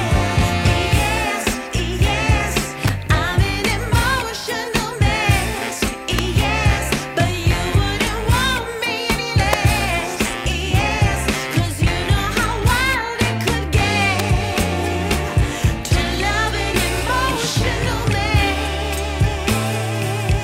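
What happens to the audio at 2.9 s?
At 2.88 s there is an electrical switching spike, most likely a nearby switch, motor or static discharge arcing briefly and coupling a burst of interference into the audio line. The arc is picked up as a sharp snap or tight cluster of clicks lasting about 15 ms, laid on top of the sound rather than replacing it.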